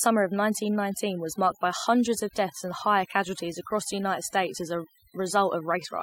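From start to finish the speech carries the marks of overdone noise removal. A noise reducer set too aggressively has pulled individual frequency bands down to nothing wherever they sat close to its noise estimate, taking the softer parts of the voice along with them. The pauses fall to near silence dotted with twinkling specks. A spectrogram shows the background as dark and scattered with isolated bright flecks, and the harmonics look patchy and eaten away.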